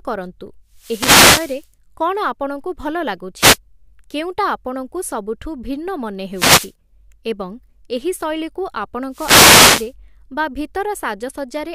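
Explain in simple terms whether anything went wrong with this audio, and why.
The radio link between the wireless microphone and its receiver kept fading, so this speech has four wireless microphone noise hits. Each time the signal weakened, receiver noise came up as a brief swish of static over the voice: from 0.71 to 1.69 s, just before "କ'ଣ ଆପଣଙ୍କୁ ଭଲ"; 3.38 to 3.58 s, before "କେଉଁଟା ଆପଣଙ୍କୁ ସବୁଠୁ ଭିନ୍ନ"; 6.33 to 6.73 s, before "ଏବଂ ଏହି ଶୈଳୀକୁ"; and 9.11 to 9.93 s.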